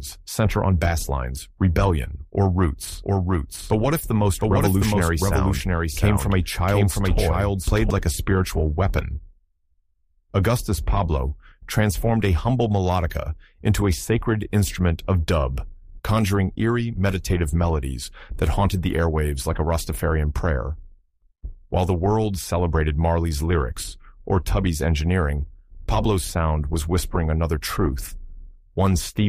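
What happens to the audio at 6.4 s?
A doubled audio track runs from 2.92 to 7.90 s. A full copy trails about 0.7 s behind at similar loudness, likely from a second, slower capture path.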